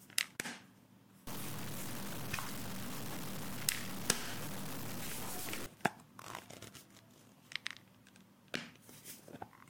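From 1.27 to 5.66 s the sound goes gritty, with error that tracks the signal and sits at roughly the same level as the sound itself. That points to truncation down to about 7 bits, likely low bit depth without dither, so quiet detail gets rounded away.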